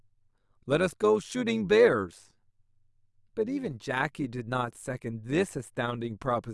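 A metallic buzz runs through the speech from start to finish, giving it a robotic quality at around 100 Hz. This is overlap-add ripple: frames were rejoined with overlapping windows that don't sum evenly, so the level dips about 6 dB once per frame.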